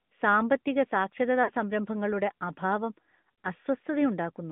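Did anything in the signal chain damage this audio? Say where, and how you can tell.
Yes. At the codec stage the whole clip runs through AMR narrowband mobile coding, and the damage is plainly audible. The line band sits at 150 Hz to 3.5 kHz with nothing above, and at about 10.2 kbps the speech comes out buzzy and synthetic because a pulse-driven vocal-tract model is standing in for the real waveform.

Over the network stage there are lost AMR speech frames, two bursts of about 40 ms each. The first runs 1.44 to 1.51 s, just before "സംരംഭങ്ങളുടെ അഭാവം", and the second comes at 3.44 s, right after "സംരംഭങ്ങളുടെ അഭാവം". Each sounds like a brief smeared dip, which points to two frames failing their checks while the decoder repeated the last good settings at falling gain.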